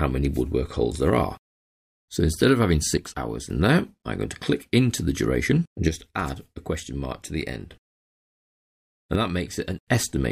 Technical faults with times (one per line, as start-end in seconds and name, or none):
2.97-3.50 one channel drops out
5.89-7.72 one channel drops out
9.15-9.78 one channel drops out